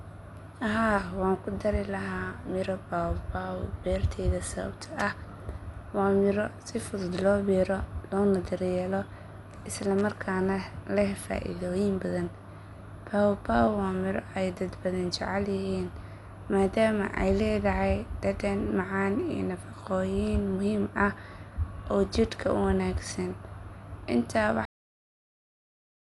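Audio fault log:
Throughout: Dolby Digital compression, likely the cause of the dull, band-limited speech with nothing above 11.4 kHz and a rough, fluttering noise clinging to tones. At around 64 kbps the encoder leaves many frequency lines without mantissa bits, and the decoder fills them with dither noise, unlike the smeared pre-echo of other codecs.
24.65 s: cut-off end, where the speech stops mid-sound and drops straight to digital silence until the clip ends at 26 s. The final buffers were never written, so there is no decay or fade as a natural ending or an edited fade-out would have.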